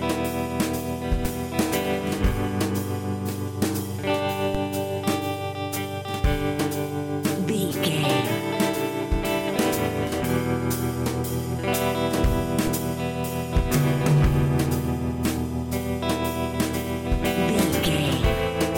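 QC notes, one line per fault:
1.25 s, 4.55 s, 12.67 s: DC step. Each time the waveform's zero line jumps by about −16 to −17 dBFS, then decays through a 20 Hz high-pass. That gives a low thump or click, and the sound carries on unbroken, unlike a dropout.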